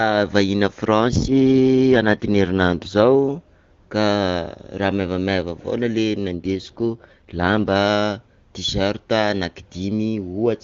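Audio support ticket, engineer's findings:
AMR rate drop, 1.00 to 3.05 s and 6.28 to 7.75 s: speech turns rough and synthetic, then recovers. Probable component: radio link adaptation forcing the AMR-WB encoder down to a lower mode, consistent with a step from 23.85 to about 8.85 kbit/s. Distinct from packet loss: no gaps or dropouts. Distinct from a narrowband fallback: the bandwidth stays wide. Only the texture degrades. Outside these spans the AMR wideband (HD Voice) codec sounds clean.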